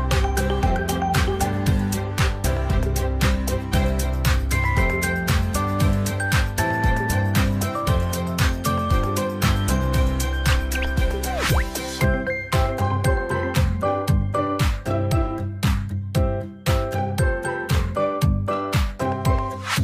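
No technical faults can be heard anywhere in this audio. At no point does the sound break off or change in an unexpected way.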